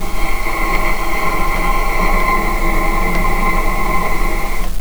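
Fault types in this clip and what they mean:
Low bit depth without dither: A grainy, rasping distortion runs through the whole clip and shifts as the sound changes. The error sits only about 20 dB below the signal, so it is loud and harsh. Quiet moments turn gritty and sputter rather than fading smoothly. The likely cause is amplitude steps coarse enough to suggest about 5 bits, with values truncated and no dither added. The error therefore tracks the signal.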